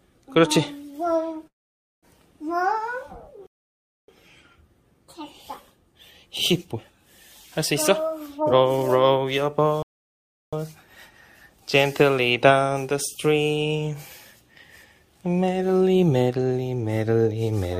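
At 1.47 s the sound breaks off in a call audio freeze lasting about 0.55 s, likely from packets held up so the jitter buffer ran dry. The last sound carries on as a brief fading buzz, then about 0.52 s of silence, and the audio resumes exactly where it stopped. On a spectrogram this shows as a short smeared tail followed by an empty band, with nothing cut out.

From 3.47 s to 4.08 s a playback stall silences the output for about 0.62 s. The likely cause is the player running out of data or its thread being blocked. The sound stops mid-flow and then continues. The waveform drops abruptly to a flat line rather than fading.

Starting at 8.37 s and running to 10.65 s, a jitter buffer speed-up plays the audio at about 135% speed while keeping the pitch unchanged. Short pitch-period slices are repeatedly cut, roughly half a second in total, to shrink an oversized buffer. The result sounds hurried. 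On a spectrogram, harmonic spacing stays constant while events crowd closer together in time.

Inside that stretch, a second playback stall from 9.82 s to 10.53 s silences the output for about 0.70 s, again shown as a clean flat gap in the waveform before the sped-up audio resumes.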